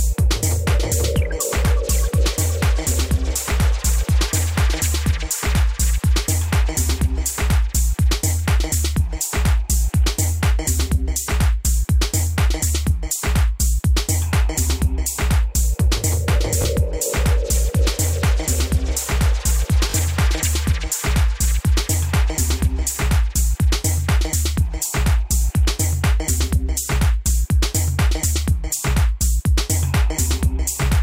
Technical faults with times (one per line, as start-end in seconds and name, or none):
16.62 repeated buffer
19.90-19.94 repeated buffer